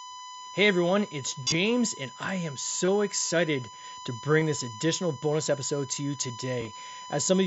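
A speech recording over a Bluetooth headset link with a steady USB whine at 1 kHz throughout, sitting roughly 15 dB below the speech. It likely comes from 1 ms USB frame activity leaking through power or ground, and it would show on a spectrogram as an unbroken horizontal line at 1 kHz. Concealed Bluetooth headset packet loss occurs at 1.43 to 1.54 s (about 75 ms lost, scattered over 105 ms, longest run 30 ms), 2.85 to 2.88 s, 4.40 s, and 6.61 to 6.67 s (30 ms lost across 60 ms). The receiver fills each gap by repeating recent waveform; single losses are nearly hidden, while runs give brief buzzy, level-held patches. On a waveform these appear as suspiciously regular repeated cycles, and on a spectrogram as smeared harmonic bands, with a small warble where real audio resumes.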